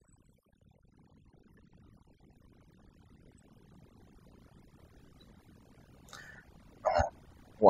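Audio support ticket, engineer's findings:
Overdone noise removal, whole clip: background dropped and broken up into twinkling specks. Denoiser set too aggressive, gating bands near its noise estimate.

Audio missing between chunks: skips at 0.62, 1.57, 2.53, 3.48, 4.44, 5.40, 6.35, 7.31 s, about every 0.96 s. Likely chunked capture dropping a few tens of ms per 1 s block, ends spliced together.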